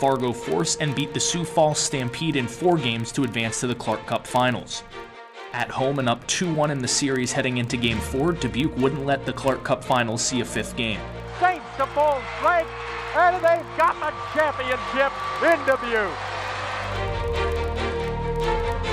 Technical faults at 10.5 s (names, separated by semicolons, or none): filter restarted on every block